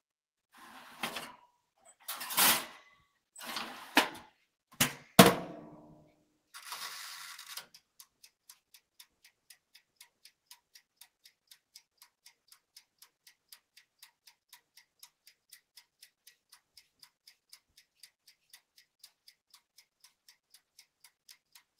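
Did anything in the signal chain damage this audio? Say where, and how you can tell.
No, nothing along the signal chain has left an audible mark on this recording, and the sound arrives with its level, timing and frequency content intact.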